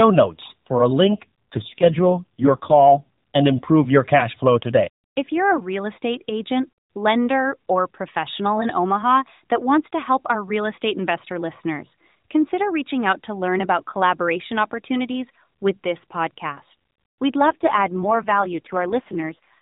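From 1.04 to 3.08 s, and again from 17.46 to 19.59 s, the speech turns rougher and more synthetic with no gap or band change, an AMR rate drop that fits the narrowband mobile codec stepping down from 12.2 to 4.75 kbps to protect a weak link.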